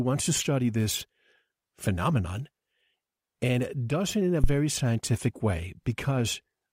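At 4.44 s, between "does it in a" and "scientific way", a phantom power thump: a supply step through the coupling capacitors gives a deep thud peaking near -8 dBFS, decaying within about 26 ms.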